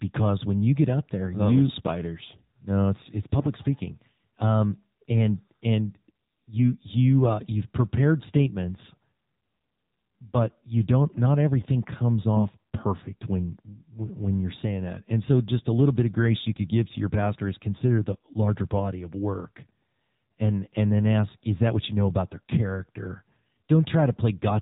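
Throughout, the speech passes through the AMR narrowband mobile codec at 7.4 kbps, which fits AMR-NB. Nothing above 4 kHz survives, and the low bitrate leaves the vocal-tract model with few pulses per subframe, so the voice sounds plainly buzzy and synthetic.

From 3.38 to 3.47 s, AMR bit errors appear. Flipped bits in the less protected parts of the frames, at a rate of roughly 3 percent, misplace the excitation pulses and skew pitch, gain and spectral detail. Across about 80 ms, which fits four 20 ms frames, the voice turns hoarse and gargly while keeping its pitch and level.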